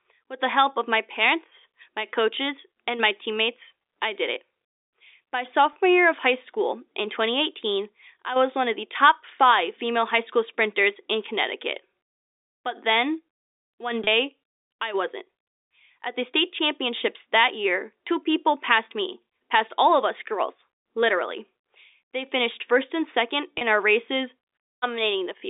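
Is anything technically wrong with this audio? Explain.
Yes, there are three short dropouts, at 5.73, 14.04 and 23.58 s, each about 30 ms. This is packet loss with pitch repetition: the receiver looped the last pitch period to cover what fits a single missing packet, so each spot sounds like a brief buzzy hold. The telephone-band G.711 coding underneath is clean.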